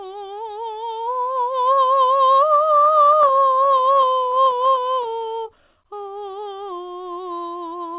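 Repeated stalls (stutter) break up this music clip from 2.74 to 5.47 s. Packets kept reaching the receiver late, so its jitter buffer ran dry again and again, and each time it extended the last bit of sound to bridge the wait. The gaps are dozens of very short ones, none longer than 17 ms, but together they add about 0.72 s of filler, roughly a quarter of that stretch. Nothing is lost; the music simply drags and judders. A jitter buffer slow-down runs from 5.39 to 6.82 s, starting just before the stalls end. The buffer, low on reserve, rebuilt it by repeating single pitch periods many times over, stretching that passage by 158 ms so it plays at 89% speed with its pitch unchanged, leaving sustained sounds drawn out. Throughout, the sound has no content above 4 kHz, the narrow telephone band that fits a G.711 call codec.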